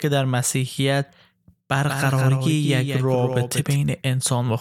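From 1.88 to 3.76 s the speech gains a second, somewhat quieter copy trailing about a fifth of a second behind, dry and full-band, cutting in and out abruptly. This doubled audio track likely comes from a slower capture path mixing the same signal in again.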